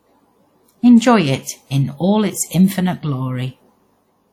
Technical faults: WMA compression

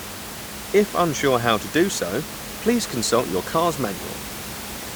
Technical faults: none

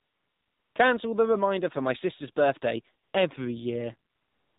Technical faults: AMR narrowband mobile codec; AMR comfort noise

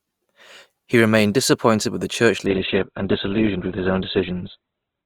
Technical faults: adaptive stream at a lower bitrate

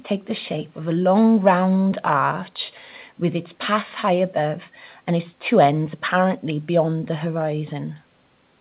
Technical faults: none

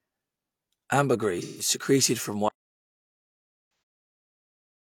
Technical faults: AAC frame loss with concealment; audio dropout to silence

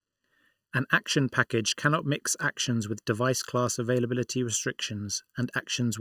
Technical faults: channel delay (comb filtering)

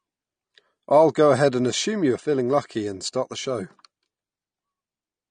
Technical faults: AAC compression

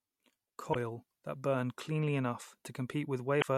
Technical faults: damaged data in a compressed stream

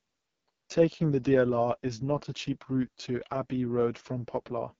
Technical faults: AMR wideband (HD Voice) codec

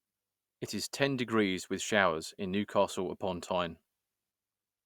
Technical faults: none

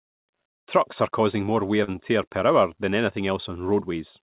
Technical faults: short concealed packet loss

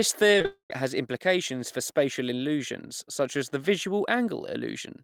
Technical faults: short concealed packet loss; long network dropout

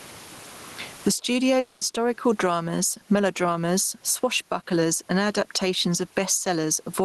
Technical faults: gain pumping; long network dropout

